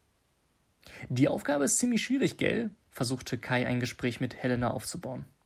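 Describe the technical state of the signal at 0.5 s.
The speech signal at 0.5 s is intact, with no audible fault at that moment.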